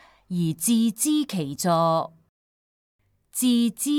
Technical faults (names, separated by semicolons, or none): none